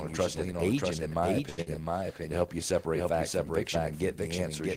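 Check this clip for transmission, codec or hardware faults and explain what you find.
Three faults stand out in this speech: a doubled audio track running through the whole clip, and two network glitches close together at around 1.5 to 1.7 s.

The doubled audio track is present throughout. A second full-band copy of the speech trails the original by roughly 0.7 s and sits about 5 dB lower. The likely cause is the same signal being captured twice, once through a slower path, so the two copies are mixed out of step. Unlike a room echo or reverb tail, the late copy has no decay and no added room colour. It is simply the same sound again, clean and only a little quieter.

At 1.49 to 1.60 s there is a short stall from a late packet. A packet missed its slot, the jitter buffer ran dry, and the receiver held the last sound for 82 ms until the data turned up. It then resumed from exactly where it had stopped. 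The result is a sound stretched too long with a slight buzz or dip, but nothing is skipped. That separates it from the loss that follows.

From 1.62 to 1.68 s comes a burst of packet loss. Here the receiver covered about 47 ms by continuing and fading the last sound. When playback picked up again, it had jumped ahead, and 80 ms of speech never arrives. The concealment sounds much like the stall, a held buzz or fading hiss. The difference is that afterwards the audio is further along, with a piece of the speech missing rather than merely delayed.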